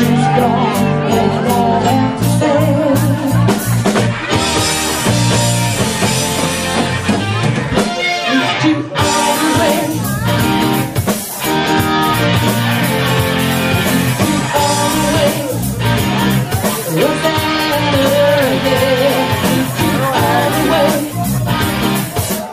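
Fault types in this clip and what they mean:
Corrupt frame decoded: a sharp, loud chirp-like burst near 18.36 to 18.41 s, close to full scale. A couple of compressed frames arrived with damaged bits and were decoded anyway, so misread gains and codes put energy at the wrong frequencies.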